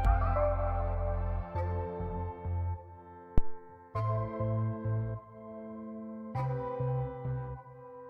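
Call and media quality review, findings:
Phantom power thump at 3.38–3.62 s: deep low thump, peaks about -11 dBFS, dies away in roughly 56 ms. Probable component: mic preamp input, phantom or supply switched while live. The DC step rides through the coupling caps as one big low-frequency swing. Worth checking nobody's toggling 48 V mid-capture.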